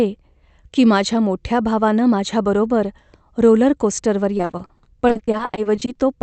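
Repeated packet loss (robotic sound) runs from 4.37 to 5.97 s: 23 short dropouts, none longer than 40 ms, each patched by stretching the preceding sound. About a third of that stretch is filled in, so the speech turns choppy, over a call-codec path that sounds band-limited near 8 kHz.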